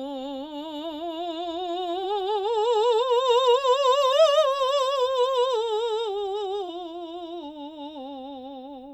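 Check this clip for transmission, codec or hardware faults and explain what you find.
The music has one codec fault, repeated three times: damaged data in a compressed stream. It occurs at 2.00 to 2.03 s, 4.09 to 4.14 s and 6.64 to 6.69 s. Each event is short, about 30 to 50 ms. At those points part of the compressed music stream is wrong. The decoder misreads the affected frames, loses sync and hunts for the next valid frame header. Each break is heard as a brief chirp or blip cutting into the music.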